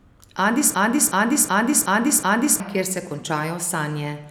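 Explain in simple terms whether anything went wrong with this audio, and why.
From 0.74 to 2.60 s there's a system hang loop: the playback froze and one 0.37-second chunk repeated five times as a stutter, wiping out about two seconds of speech.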